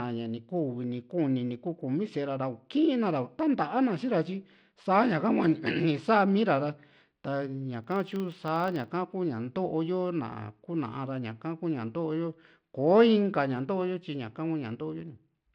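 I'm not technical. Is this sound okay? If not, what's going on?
No. Throughout, the speech has a gritty treble that drops out or flickers; that is likely Bluetooth SBC compression squeezing the sound hard enough to damage it audibly.

From 7.84 to 8.92 s, a low buzz of about 25 ticks per second rides on the voice: a filter restarted on every block, starting each chunk from silence.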